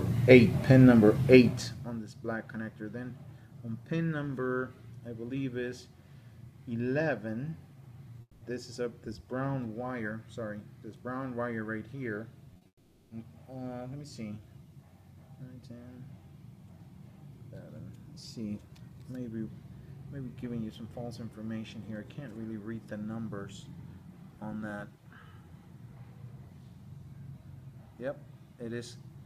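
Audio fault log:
8.21–8.43 s, long network dropout: the sound carries on as a fading buzz or hiss for about 200 ms, then drops to near silence before audio resumes with that stretch gone. This likely comes from a gap in arriving network audio that the receiver could only paper over by extending what it last had.
12.53–12.67 s, short concealed packet loss: three quick smears follow back to back at 12.53, 12.57 and 12.63 s, lasting 20, 40 and 20 ms, giving a brief wobble. Each hole was filled by continuing the preceding sound, then blended back into the real signal.
12.67–13.13 s, long network dropout: straight after those smears, a fading continuation of about 440 ms tails into silence, and the audio picks up later without the lost portion. The likely cause is a longer interruption in delivery that the receiver extended over before going quiet.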